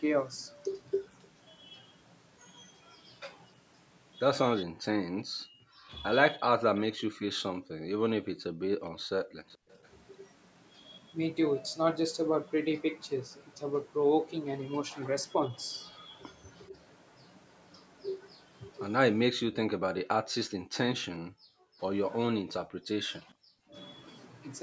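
From 4.65 to 8.87 s the speech dips and breaks up in pieces, adding up to about a second and a half. The deepest cuts reach about 40 dB. This is speech suppressed in double talk. The likely cause is both sides talking at once. The echo canceller could not tell this talker from loudspeaker echo, so it pulled everything down.

From 7.54 to 9.69 s the room sound drops out, about 0.7 s in all, by about 40 dB. This is background gated by the echo canceller. While the far side played through the loudspeaker, the canceller clamped the microphone hard. The room tone comes back when it releases.

From 9.53 to 9.89 s a faint delayed copy of the speech appears, 446 ms late and about 30 dB below the main talker. This is an echo leak. The canceller likely missed part of what the microphone picked up from the loudspeaker, and the remainder was sent back as a short, quiet scrap.

At 16.7 s there is a brief dip of about 5 dB lasting roughly 70 ms. 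From 19.67 to 21.81 s the background is gated again, about 0.7 s in all, dropping by about 40 dB. At 21.1 s the speech cuts by about 35 dB for roughly 70 ms. From 22.32 to 23.75 s it drops out in pieces totalling about 0.4 s. The background gates once more from 22.83 to 23.03 s. The audio carries nothing above 8 kHz throughout.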